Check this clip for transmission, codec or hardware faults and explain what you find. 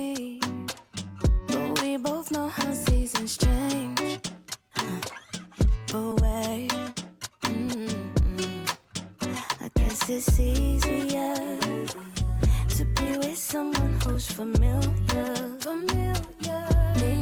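Two transmission faults are present: one skip ahead, followed by three stretches of jitter buffer speed-up.

At 6.1 s, roughly one and a half seconds of audio was discarded while later audio was already queued, so playback jumped forward with no fill. The audio before and after butts together almost directly, and the missing stretch simply never plays.

The jitter buffer was then holding more audio than its target, so the receiver trimmed short pitch-period slices repeatedly to pull the delay back down. From 6.15 to 8.91 s the audio runs about 8% fast, shedding roughly a fifth of a second. From 9.68 to 10.35 s it runs about 5% fast, and from 12.08 to 14.48 s about 3% fast. Pitch stays the same throughout, but the first two stretches sound hurried, most of all the first and longest.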